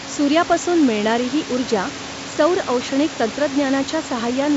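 No technical faults can be heard in this speech clip. Room noise sits about 14 dB below the speech, and the sound carries the roughly 7 kHz bandwidth of G.722 wideband telephone coding, with at most a faint trace of its coding.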